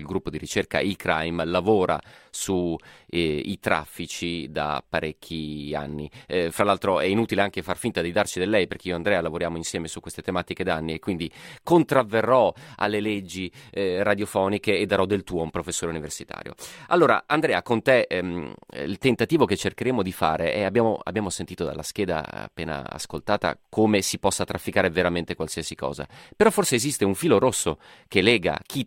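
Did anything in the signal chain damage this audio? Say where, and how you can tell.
No, nothing along the signal chain audibly damaged this speech recording; it reaches the listener intact at every stage from capture to playback.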